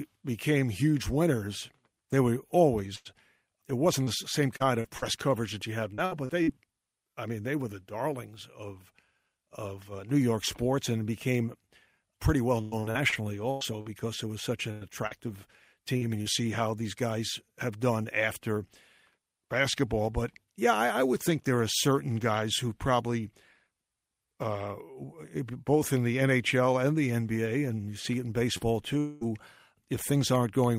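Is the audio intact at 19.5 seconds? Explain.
Yes, the speech at 19.5 seconds plays through intact, with no fault audible at that moment.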